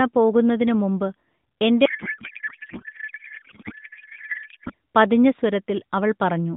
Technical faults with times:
1.86-4.74 codec payload misread

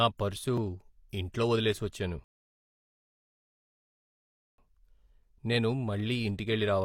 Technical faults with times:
2.24-4.58 rebuffering stall

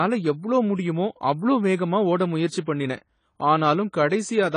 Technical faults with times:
0.00-4.57 AAC compression

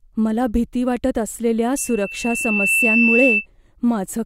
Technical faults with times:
1.77-3.46 loudspeaker feedback squeal

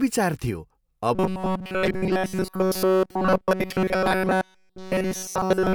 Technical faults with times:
1.15-5.75 robotic sound from repeated short buffers

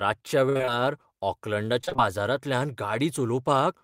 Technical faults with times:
0.49-0.69 repeated packet loss (robotic sound)
1.81-2.00 repeated packet loss (robotic sound)

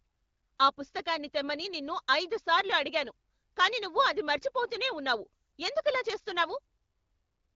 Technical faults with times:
none

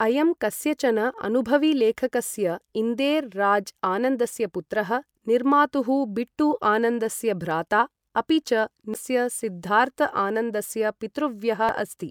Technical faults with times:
8.94 damaged data in a compressed stream
11.69 damaged data in a compressed stream

